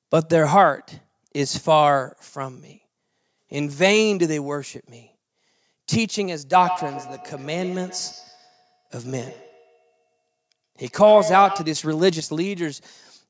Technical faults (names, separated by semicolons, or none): feedback echo between two devices